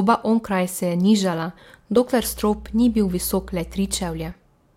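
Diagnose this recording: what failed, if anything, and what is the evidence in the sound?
A steady 60 Hz drone sits fairly loud under the speech from 2.21 to 4.32 s: mains hum, power-line coupling into the analogue wiring.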